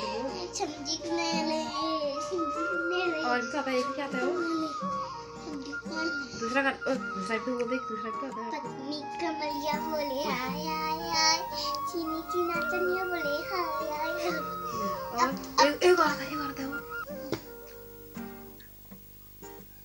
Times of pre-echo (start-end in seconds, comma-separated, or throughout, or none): none